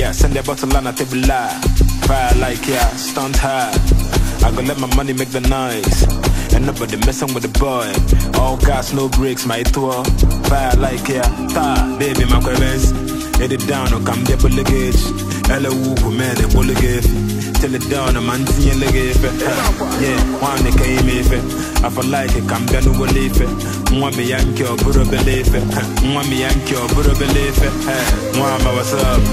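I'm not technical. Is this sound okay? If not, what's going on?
No, it has two problems. The whole clip sounds dull and plainly gurgly, with a grainy edge. That points to MP2 compression, the format used for DAB digital radio. Here it was likely squeezed too hard, so the high detail switches off and what remains sounds coarse.

There are also short bursts of DAB burbling, from 5.92 to 6.23 s, 25.03 to 25.82 s and 27.50 to 27.94 s. Weak reception corrupted a small share of the data, which put short blips of noise into parts of the sound.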